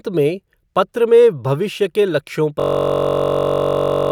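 At 2.6 s the speech gives way to a system hang loop that lasts to the end. The machine froze, and the hardware kept replaying one 21.33 ms slice. That fits a 1024-sample buffer. It sounds like a steady buzz at about 46.9 Hz.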